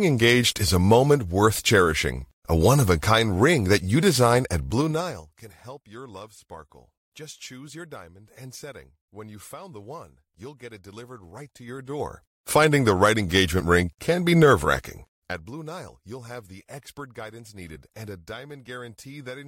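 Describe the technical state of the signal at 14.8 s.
At 14.8 s the signal is at the start of zipper noise, which runs from 14.77 to 15.60 s, just after "engagement ring can be". The level is being pulled down by around 20 dB, but in unsmoothed 3 dB jumps at roughly seven per second rather than as a continuous fade. Each jump puts a small discontinuity in the waveform, so a ticking, zipping texture rides on the speech while the level falls.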